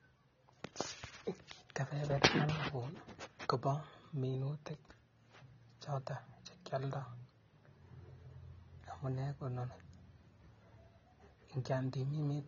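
Throughout the speech, nothing reaches above 7 kHz, and the dull, smeared texture of a low-bitrate codec stays constant. This is likely low-bitrate audio saved at a high bitrate. The sound points to an earlier pass near 24 kbit/s being re-encoded as high-rate MP3. Unlike a clean low-pass filter, the first codec's damage persists, and the larger file cannot restore what was removed.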